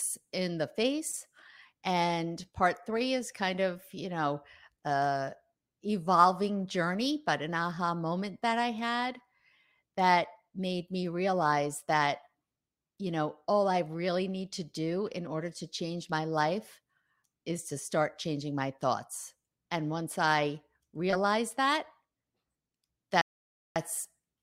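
Right near the end, at 23.21 s, the speech cuts out into dead silence and then picks up again at 23.76 s, exactly where it left off. That's a rebuffering stall: the player ran dry of downloaded audio and simply paused until more came in. Nothing gets skipped or chopped, you just lose about half a second, roughly 0.54 s of extra time spliced into the flow.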